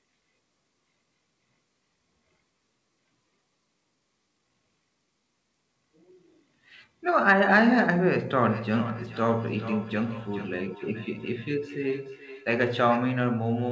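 From 8.42 s to 13.08 s the speech picks up a feedback echo between two devices. Each phrase comes back roughly every 0.4 s, repeating thinner and more ringing, with the loudest return sitting about 16 dB below the direct speech. What's happening is that a second device in the room is playing this call out loud, and this microphone is catching it again. The local echo canceller only removes its own playback, so the loop goes round untouched. The whole clip is band-limited to 8 kHz, which fits a wideband G.722 call path.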